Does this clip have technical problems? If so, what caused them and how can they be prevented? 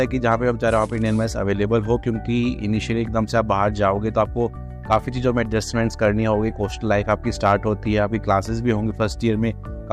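Yes: brief crackle on peaks at 0.27–0.34 s, 4.92–4.96 s and 7.11–7.53 s is hard clipping, where peaks overran the signal path by about 1 dB and were flattened. Lowering gain before conversion, leaving a few decibels of headroom, prevents it.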